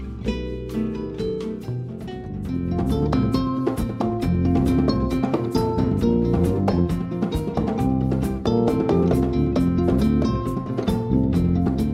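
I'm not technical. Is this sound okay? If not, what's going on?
Yes, this sound is okay. Nothing in it stands out as a technical problem, so there's nothing you need to do about it.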